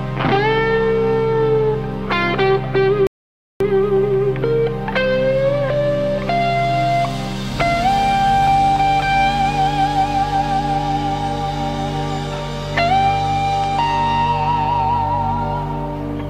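At 3.07 s the audio drops to silence and stays silent until 3.61 s, a rebuffering stall of about 0.54 s. The player exhausted its store of downloaded audio and halted playback until more data arrived. When sound returns it picks up exactly where it stopped, with nothing skipped or repeated, so no material is lost. The stall instead inserts about half a second of dead air, stretching the timeline by that amount.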